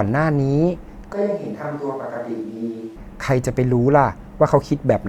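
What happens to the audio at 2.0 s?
At 2.0 s the speech sits inside a switch to a distant microphone, running from 1.13 s to 2.96 s. The voice abruptly turns roomy and hollow, loses bass, drops by roughly 10 dB and carries a noise floor only about 30 dB below it, likely because the close microphone's signal dropped out and a farther pickup took over. On the waveform the envelope shrinks sharply at the start and grows back sharply at the end; a spectrogram shows thinned low frequencies and smeared reverberant tails.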